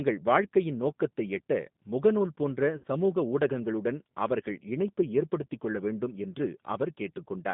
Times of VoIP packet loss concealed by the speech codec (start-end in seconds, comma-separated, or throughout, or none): 2.78-2.84